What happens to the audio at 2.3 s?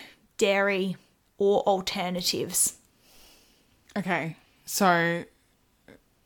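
Nothing goes wrong at 2.3 s; the speech runs through that moment intact, with no dropout, click, or other fault.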